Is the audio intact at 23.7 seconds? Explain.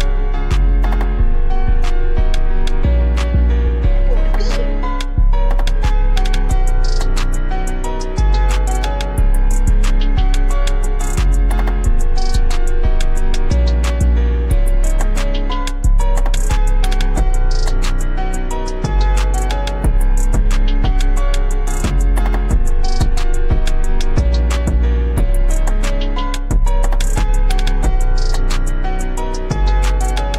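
Yes, the audio plays through cleanly at 23.7 seconds, with no fault at that moment.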